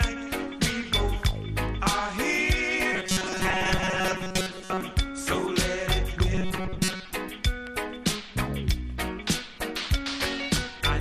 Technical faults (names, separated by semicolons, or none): MP2 compression; robotic sound from repeated short buffers